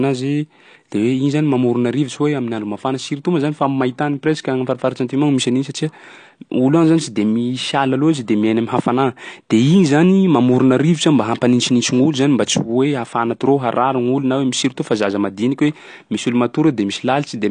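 From start to end, speech stops dead above 9.8 kHz with smeared, fizzy artefacts that simple low-pass filtering wouldn't add, likely from AAC compression.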